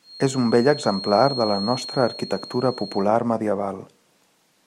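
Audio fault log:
0.0 to 3.1 s, feedback whistle: a thin, steady whistle at 4.3 kHz sits about 15 dB under the speech and swells and fades slowly in level before stopping at 3.1 s. The likely cause is a loudspeaker-to-microphone loop held right at the edge of feedback. One frequency near 4.3 kHz gets just enough gain round the loop to keep ringing, but not enough to build into a howl, so it stays a faint, sustained tone behind the talker.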